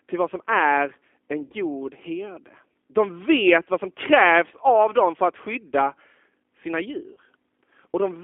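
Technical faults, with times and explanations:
Throughout: G.729 codec. The speech is carried at 8 kbit/s and sits in a telephone band of roughly 250 Hz to 3.5 kHz. Each 10 ms frame is rebuilt from a vocal tract filter, a pitch predictor and a few pulses, so the speech is plainly rough and synthetic. On a spectrogram, nothing shows above 3.5 kHz and the harmonics look smeared.
1.45–1.53 s: VoIP packet loss concealed by the speech codec. About 60 ms went missing just after "vad som är en". The decoder extended the last pitch and filter with falling gain, which gives a short buzzy tone or coloured noise that fades. The waveform shows a shrinking stretch, and the spectrogram shows a frozen, unchanging spectrum.
7.14–7.18 s: VoIP packet loss concealed by the speech codec. Around 30 ms dropped out after "för att skydda sina". The decoder repeated its last pitch and spectral shape at lower gain, so the sound briefly turns buzzy or noisy and weak. 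The spectrogram shows a steady, frozen spectrum, and the waveform envelope sags before recovering.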